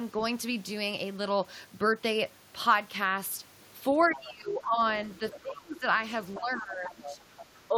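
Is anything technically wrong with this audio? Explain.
Yes, the clip is speech with echo-cancellation problems in its second half.

Other side's voice leaking through appears at 4.03 to 4.31 s, 5.31 to 5.4 s, 6.35 to 6.4 s and 7.04 to 7.46 s. A second, fainter voice sits roughly 15 to 20 dB below the main talker, arriving in short scraps. The likely cause is the talker's loudspeaker playing the far end into the microphone, with the echo canceller leaving part of that signal behind.

Speech suppressed in double talk occurs at 4.08 to 4.8 s, 5.19 to 5.85 s, 6.39 to 7.2 s and briefly at 7.68 to 7.75 s. Each episode overlaps or closely follows the leaked voice, and the main talker's level sinks: by around 15 dB in the first and third, by about 25 dB at 5.19 to 5.85 s, and only slightly in the last. The likely cause is the canceller failing to separate its own talker from the echo and turning both down together.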